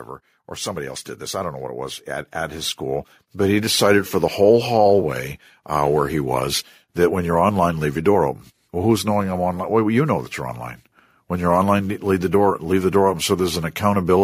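From 0.47 to 4.43 s, automatic gain rising: the gain control found the speech too quiet and lifted it about 11 dB. Voice and background swell together.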